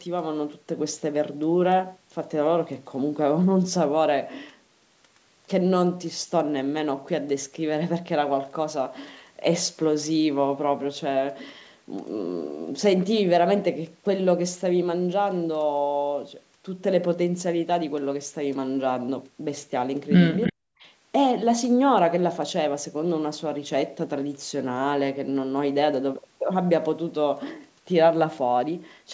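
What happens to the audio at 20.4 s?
At 20.42 to 20.53 s there is an echo leak: the far end's echo canceller likely failed to remove its loudspeaker's sound from its microphone, so a copy of the speech returns about 312 ms late, roughly 10 dB below the direct speech, as a brief scrap. Overlapping it, from 20.49 to 20.63 s, comes speech suppressed in double talk: with both sides active, the canceller likely mistook the talker for echo and pulled everything down, so over about 150 ms the speech drops by as much as around 40 dB at its deepest.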